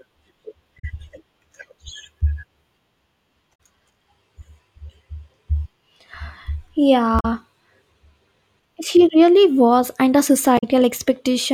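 At 0.78 to 0.85 s the speech breaks into a short glitch. It is damaged data in a compressed stream. Corrupted bytes make the decoder misread its frames and lose sync until it finds a valid header. A much briefer blip follows at 3.57 s. The same 64 ms glitch returns at 7.19 to 7.25 s. It comes again at 10.57 to 10.64 s, right after "really was and the".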